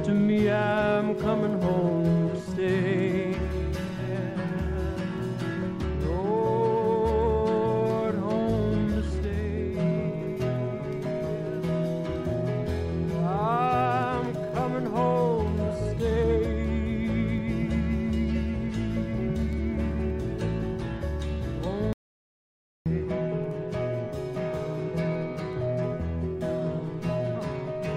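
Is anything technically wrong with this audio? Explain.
Yes. From 21.93 to 22.86 s, an audio dropout to silence: the input likely disconnected or muted while recording continued, leaving about 0.93 s of dead silence with no room tone.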